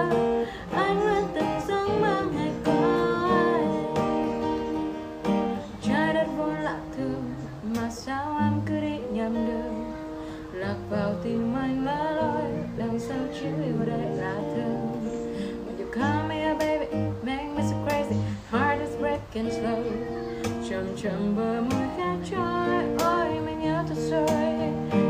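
No technical faults are audible anywhere in the recording.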